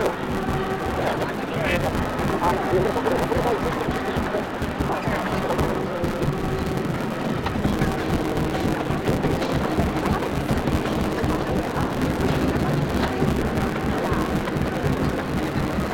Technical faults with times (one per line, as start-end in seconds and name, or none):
0.00-15.94 block size mismatch (truncated)